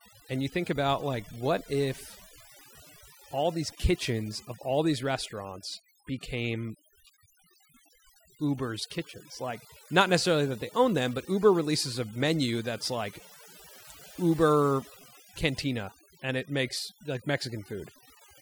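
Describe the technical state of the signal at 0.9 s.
Overdone noise removal is present at 0.9 s, as it is across the whole clip. An aggressive noise reducer is pulling individual frequency bands down or out whenever they sit near its noise estimate, so the background drops and breaks up into twinkling specks, and quiet parts of the speech are pulled down with it.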